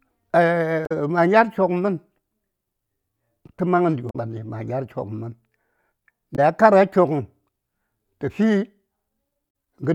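Four short bursts of damaged data in a compressed stream break up the speech. They fall at 0.83 to 0.92 s, 4.07 to 4.16 s, 6.33 to 6.39 s and 9.47 to 9.49 s. Each is under a tenth of a second. At each point, bytes in the compressed stream were corrupted. The decoder misread those frames, lost sync and hunted for the next valid frame header. Each break sounds like a chirp, squawk, click or short hole cutting into the speech.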